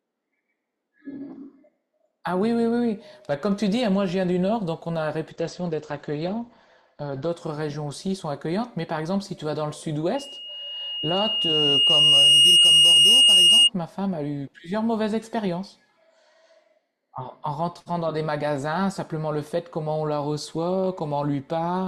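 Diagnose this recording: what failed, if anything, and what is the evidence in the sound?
Network stage. From 5.31 to 7.31 s the speech suddenly turns dull and synthetic, with no gap. That sounds like an adaptive stream at a lower bitrate, perhaps Opus 64 falling to 12 kbit/s.

Analogue acoustic loop. At 10.15 s a 2.8 kHz loudspeaker feedback squeal swells over about two seconds. It sits roughly 10 dB above the speech until 13.70 s.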